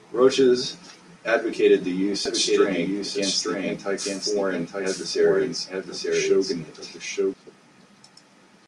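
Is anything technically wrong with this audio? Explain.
Yes. From 2.26 s to 7.34 s, right after "advocated the use", the speech shows a doubled audio track. This is likely a second capture of the same signal arriving through a slower path, mixed in alongside the original. The result is a full-band copy trailing about a second behind and somewhat quieter, so each phrase returns as a dry, distinct repeat with no decay or room colour. The copy cuts in and out abruptly at both ends.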